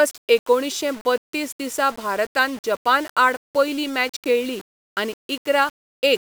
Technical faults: low bit depth without dither

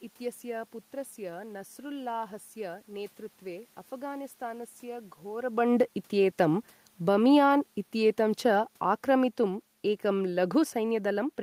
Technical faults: automatic gain falling

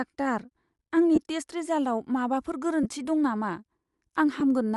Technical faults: Bluetooth LC3 compression; lost LE Audio frames

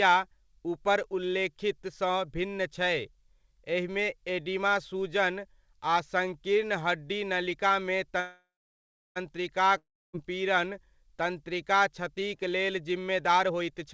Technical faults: call audio freeze; long network dropout; jitter buffer speed-up

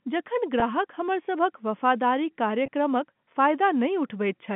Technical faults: packet loss with pitch repetition

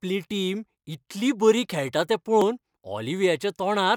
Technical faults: damaged data in a compressed stream

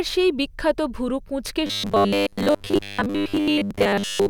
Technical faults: robotic sound from repeated short buffers

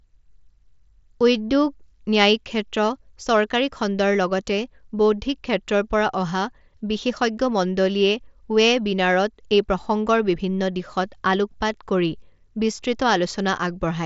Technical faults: none

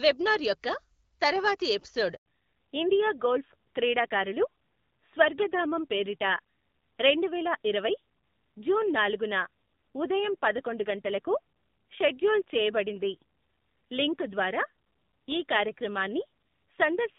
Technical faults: handover gap; fallback to narrowband

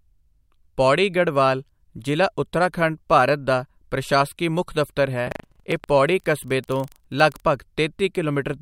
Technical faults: buffer tearing

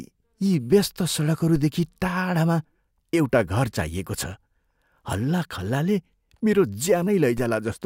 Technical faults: DC step

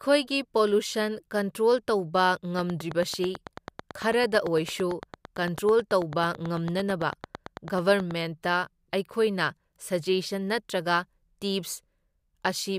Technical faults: train of clicks

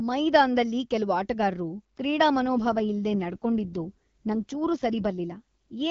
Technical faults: AMR rate drop

